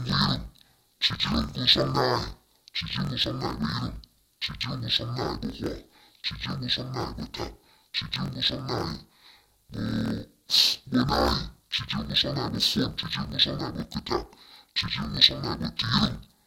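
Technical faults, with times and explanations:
Throughout, interleaved audio read as planar: the speech sits an octave low and has a dull, robotic buzz running at about 41.7 Hz. Each 24 ms block of alternating left-right samples gets split down the middle, first half sent left, second half right, so each channel plays its half stretched to double length. That halves the pitch, while the block-by-block chopping keeps the pace right but stamps that steady buzz over everything.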